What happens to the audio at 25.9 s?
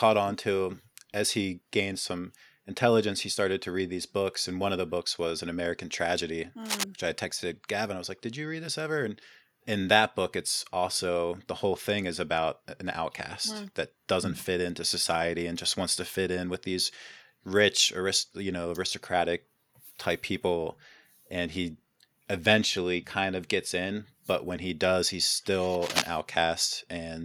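A burst of cable scratch noise runs from 25.82 to 26.02 s, just after "when he does he's". It is a dense, uneven rustle about as loud as the speech. Likely a worn cable or connector being moved.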